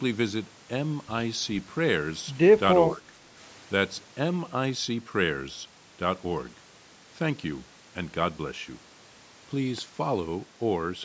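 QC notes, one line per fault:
2.94–3.37 s, speech suppressed in double talk: speech dips about 5 dB, likely an echo canceller turning the near talker down while both sides spoke.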